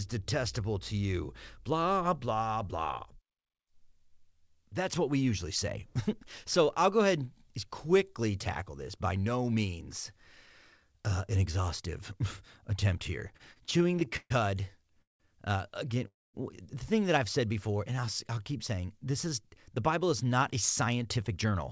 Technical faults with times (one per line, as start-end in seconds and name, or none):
13.20-14.32 repeated stalls (stutter)
15.02-15.22 call audio freeze
16.07-16.36 call audio freeze
17.48-19.56 jitter buffer slow-down
21.17-21.52 jitter buffer speed-up